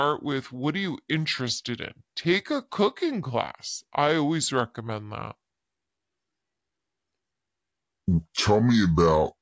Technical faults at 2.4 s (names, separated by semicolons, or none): wrong sample rate